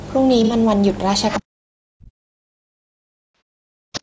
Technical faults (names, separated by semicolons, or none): low-delay AAC compression; AAC frame loss with concealment; other side's voice leaking through; speech suppressed in double talk